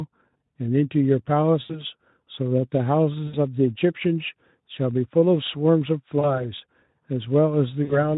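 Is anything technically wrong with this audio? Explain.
Yes. VoIP packet loss concealed by the speech codec occurs four times, at 1.61–1.83 s, 3.27–3.38 s, 6.19–6.43 s and 7.83–8.11 s, with about 80, 60, 40 and 60 ms of audio missing. When packets fail to arrive, the decoder extends the last pitch and spectral shape it had, turning the speech into a brief buzzy, smeared tone that fades. Because each rebuilt frame feeds the next, the voice stays thin and rough a little past each gap. The underlying light Speex coloration is steady throughout.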